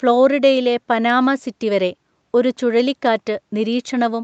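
No technical faults can be heard in this speech, which reaches up to about 8 kHz as expected for audio carried over a call.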